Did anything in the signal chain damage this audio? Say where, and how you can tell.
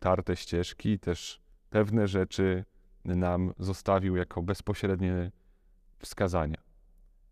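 No, nothing in the signal chain damaged this audio.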